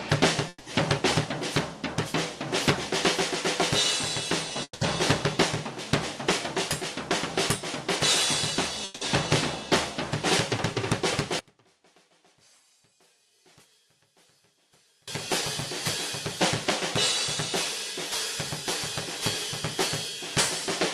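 The audio stops three times, at 0.48 to 0.67 s, 4.63 to 4.82 s and 8.84 to 9.02 s, most likely from long network dropouts: the last sound is stretched into a fading buzz or hiss for about 0.17 to 0.18 s, with brief silence after the first two. Short concealed packet loss at 4.48 s and 4.53 s leaves two brief smears where about 10 ms each was filled in. From 11.39 to 15.08 s the level falls by about 33 dB, probably from one channel being inverted, so centred content cancels in mono and only a faint remnant is left.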